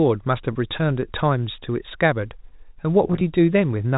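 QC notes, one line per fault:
0.53–0.55 s, packet loss with pitch repetition: a 20 ms gap gets patched by looping the last pitch period, so you hear a brief held, slightly buzzy bit instead of a dropout.
3.07–3.21 s, packet loss with pitch repetition: about 60 ms lost in bits scattered over 140 ms, none longer than 20 ms, so it's a short stretch of repeated buzzy snippets that never fades to silence.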